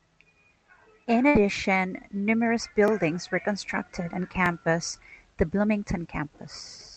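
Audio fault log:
1.28–1.36 s, burst of packet loss: a run of packets on the call link never arrived in time, leaving a hole of about 70 ms in the speech. The receiver's concealment stretched the last received sound across roughly 64 ms, fading it as the gap went on, so the sound smears into a brief dying tail before the speech picks up again further on, with the stretch in between simply gone.
2.88–2.90 s and 4.46–4.48 s, repeated buffer: twice the playback device ran dry and replayed its last 20 ms block once more, the first time just before "were constructed on" and the second just after it. No audio is skipped; instead the same 20 ms slice sounds twice, joined by a hard edge each time. At that size the repeat comes across as a short click-like stutter, audible through the Opus call path's 8 kHz band limit.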